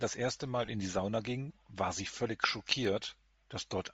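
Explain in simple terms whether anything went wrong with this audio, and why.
Several things went wrong. The speech was squeezed through a low-quality wireless link, most likely Bluetooth LC3 compression, the codec used by Bluetooth LE Audio. To save data it throws away much of the upper detail and fills the gap with noise, so the voice sounds breathy and grainy the whole way through.

From 0.65 to 0.68 s, just before "in die", the wireless link had lost LE Audio frames, about 30 ms' worth. The receiver guessed by reusing the last bit of sound with scrambled detail, so there is a brief noisy smear there instead of clean speech.

At 0.79 s, and at 2.85 s right after "ging war sie völlig", there are likely dropped samples: a tiny sliver of the sound, only a handful of samples, probably went missing. The waveform jumps abruptly across that gap, which is heard as a single sharp click each time.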